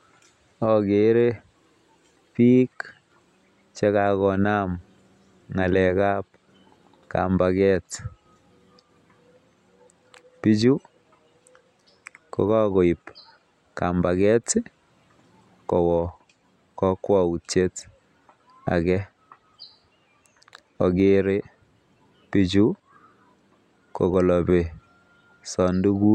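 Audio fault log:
Nothing to log here; the speech comes across without any audible faults.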